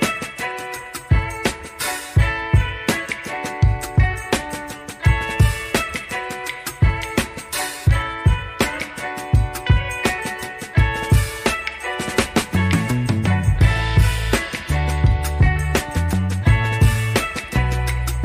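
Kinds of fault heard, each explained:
No technical faults can be heard in this audio: the signal keeps its level steady and its frequency content intact, with no interruptions or added noise anywhere in the clip.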